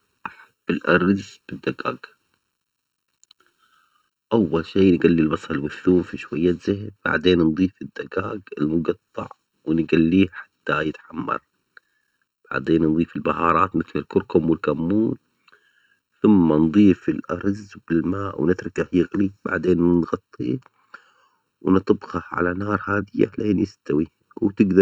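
Throughout, channel delay produces comb filtering. One channel lags by under a millisecond, so the mono sum notches from about 700 Hz upward, leaving the speech hollow.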